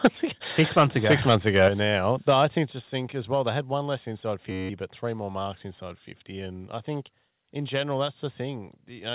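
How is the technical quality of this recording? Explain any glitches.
The recording has three kinds of glitch: harsh distortion at the start, sudden drops in level, and one buzzing freeze. It also comes through a narrowband call path with nothing above 4 kHz, so it sounds muffled throughout.

At 0.04 to 0.07 s and again from 0.59 to 1.68 s, the loudest syllables have a gritty, crackling edge. This is most likely microphone overload. The input drove the converter about 9 dB past its limit at first, flattening roughly a third of the waveform in that brief burst. In the longer stretch it was about 6 dB over, so only a small fraction of peaks are squared off. Cutting off those tops is what adds the harsh edge.

During and right after these distorted passages, and once more later, the whole sound, background included, drops abruptly in level. The drops come at 0.06 s (about 2 dB), at 1.68 s just before "now I think just" (about 6 dB), and at 2.7 s (about 5 dB). 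These are microphone volume steps down. Call software likely detected the clipping and lowered the device's input gain in single jumps rather than fading it.

From 4.51 to 4.69 s, between "had one less inside" and "but three more marks", the audio turns into a steady buzz near 94 Hz. This is a system hang loop. The computer stalled while the sound hardware kept replaying one 10.67 ms chunk, which fits a 512-sample buffer, 17 times over. The rapid repetition is heard as a tone, and about 200 ms of real audio is lost.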